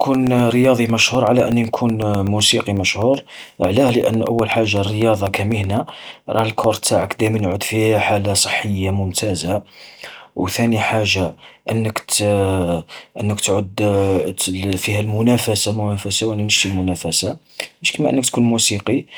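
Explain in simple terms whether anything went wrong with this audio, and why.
From 0.14 s to 7.52 s, just before "في حالة صحية ممتازة", the speech carries a steady ticking, eight ticks per second, one every 0.125 s. These are periodic USB or driver dropouts: something on the computer briefly blocks the audio path at a fixed rhythm, and each time about a millisecond of sound is replaced by silence. Random clicks would come at uneven moments. These keep an exact beat, dozens of them, heard only while there is sound.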